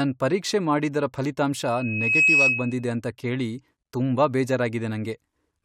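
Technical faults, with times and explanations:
1.64 to 2.85 s, loudspeaker feedback squeal: a pure tone at 2.6 kHz swells over about half a second and stays roughly 10 dB above the speech. The microphone hears its own loudspeaker. At that frequency the loop gain passes one, so the tone keeps feeding itself.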